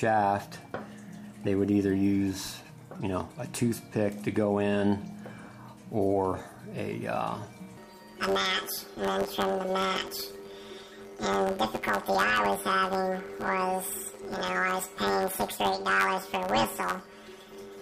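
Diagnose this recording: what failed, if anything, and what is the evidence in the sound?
From 7.77 s to the end of the clip, the sound turns into a robotic buzz pulsing at about 93.8 Hz, with no clear octave shift. This is planar audio read as interleaved, a fault in the sample-format conversion or buffer-handling stage. Each 10.67 ms block holds all of one channel and then all of the other, which fits a 512-sample block. Read as alternating pairs, each block plays twice at double speed, so the overall pace holds. At this short block length, the repeating seam at the block rate is heard as a buzz rather than a pitch jump.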